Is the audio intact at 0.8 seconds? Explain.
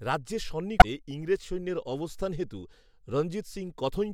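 No. From about 0.78 to 0.85 s, roughly 64 ms, the speech is interrupted by damaged data in a compressed stream. Corrupted bytes in the encoded file make the decoder misread those frames and lose sync, so it has to hunt for the next valid frame header. It is heard as a brief chirp, squawk, click or short hole.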